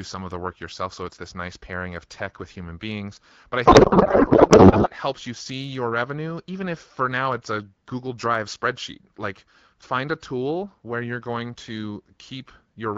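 From 3.65 to 4.90 s the speech gives way to garbled noise and a watery warble that barely tracks the talker, ending just before "helps you see your". This is a codec payload misread. The AMR wideband frames, at 12.65 kbit/s, were packed in octet-aligned form but read as bandwidth-efficient, so the decoder pulled its fields from the wrong bit positions and synthesised nonsense for about 1.25 s until both ends agreed again.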